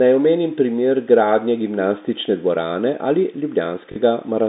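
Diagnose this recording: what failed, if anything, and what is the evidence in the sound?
Network stage: packet loss with the last packet repeated, 3.92 to 3.96 s. The receiver replayed stale audio across 40 ms, which fits two lost 20 ms packets. The repeats ignore the pitch period, so the speech briefly stutters robotically.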